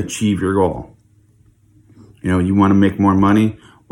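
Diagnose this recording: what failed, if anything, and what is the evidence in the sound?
Nothing in the speech points to a failure at any stage of the chain, from capture and conversion through to playback.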